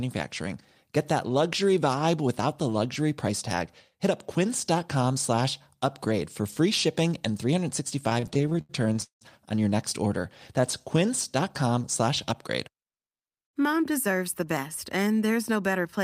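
From 8.09 to 9.23 s, just before "on your next order", the speech stutters with repeated stalls. Packets arrived late, so the jitter buffer kept running dry. The receiver stretched the last sound across 15 gaps, 408 ms in all. The longest lasted 171 ms. Concealment fills 36% of that span. Nothing is lost, but the speech drags and catches.

Right after "on your next order", from 10.61 to 11.07 s, there is a jitter buffer slow-down. The buffer was short of audio. The receiver repeated single pitch periods to rebuild it, adding 35 ms. Speech runs at 94% speed with unchanged pitch. Sounds are drawn out.

From 13.06 to 14.08 s, after "slash upgrade" and before "the best and", a jitter buffer speed-up occurs. The buffer held too much audio. The receiver cut short pitch-period pieces, about 70 ms in total. Speech runs at 107% speed, pitch unchanged, and sounds hurried.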